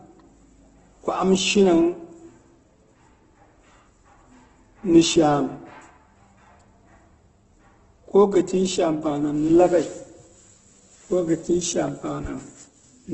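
Throughout the speech, the top of the spectrum stops near 8.1 kHz and what remains sounds rough and grainy, with tonal parts of the voice smeared into noise. This is likely Opus compression working at a very low rate, which fits about 12 kbps in its music-oriented mode. Starved of bits, it fills bands with noise or folded copies. A spectrogram shows a flat ceiling at 8.1 kHz, with harmonics dissolving into speckled texture below it.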